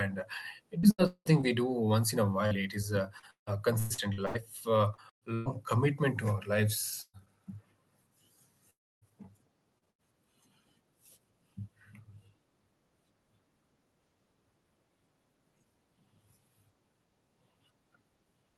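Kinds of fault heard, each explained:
Repeated packet loss (robotic sound): Packets kept going missing, and each hole was patched by stretching the previous sound. After "uh it", until "commitment to our", 15 gaps (longest 190 ms) leave a quarter of the audio synthetic and choppy; 9.09 to 10.01 s has four shorter gaps.
Burst of packet loss: Several consecutive packets, about 120 ms in all, never arrived in time. Right after "commitment to our", near 7.02 s, the receiver extends the last sound and fades it, ending in roughly 50 ms of silence before the audio resumes with that part gone.
Long network dropout: From 8.70 to 9.04 s the audio breaks off. A brief carried-over tail dies into about 290 ms of silence, and roughly a third of a second is lost when sound returns, most likely because no packets reached the receiver during that stretch.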